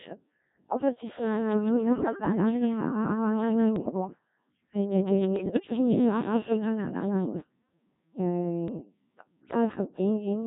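The whole clip carries the heavy, buzzy robotic sound of a Codec 2 vocoder, which fits a rate of about 1.3 kbit/s. The voice is rebuilt from pitch and envelope, so the original waveform is lost. Bit errors on digital voice radio hit at 1.90–2.32 s, 3.76–4.07 s, 5.36–5.60 s and 8.68–8.85 s. Each burst corrupts roughly 4 to 10 percent of the bits, so pitch and level lurch into warbly, bleepy gibberish.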